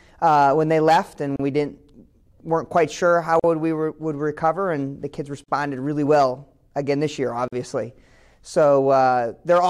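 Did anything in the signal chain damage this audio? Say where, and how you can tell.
Yes. Brief silences with smeared edges open at 1.36 s (34 ms), then at 3.40, 5.44 and 7.48 s (43 ms each), every 2 s. These are codec-stage gaps at joins of encoded pieces, where untrimmed encoder delay and end padding remain.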